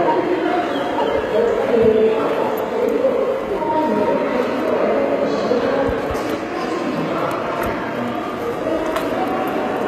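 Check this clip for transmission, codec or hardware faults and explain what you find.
One fault runs through the whole clip. HE-AAC compression, throughout, is the likely cause. The codec keeps only the lower spectrum and synthesises the treble by copying lower bands upward. Harmonics fail to align, so the top end sounds gritty and metallic, with plainly audible damage, nothing above 14.7 kHz, and a character that fits a very low bitrate around 20 kbps.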